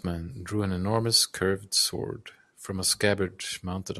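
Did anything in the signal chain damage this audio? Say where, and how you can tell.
No, nothing stood out on listening that would point to damage anywhere in the signal chain.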